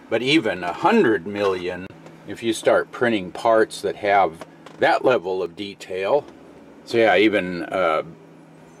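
At 0.57 s and again at 5.46 s the sound jumps, losing roughly 10 ms and then 20 ms; a dropped buffer (overrun) is the likely cause. The waveform shows an abrupt discontinuity with no gap, and the spectrogram a thin vertical broadband line.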